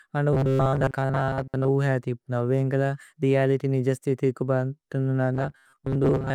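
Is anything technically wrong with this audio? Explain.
Yes. From 0.33 to 1.71 s, just before "ഉഹേ അതിപുന്ദു ഏന്ക്ലേല രേഅലിത്യ്", and again from 5.34 to 6.34 s, after "രേഅലിത്യ് നിജസ് സ്തിഥി കുബന്തുന്ദു", the speech becomes a rigid metallic buzz at 133 Hz. This is robotic sound from repeated short buffers. The likely cause is late-arriving audio, with the last short buffer, about 7.5 ms, replayed for most of the time.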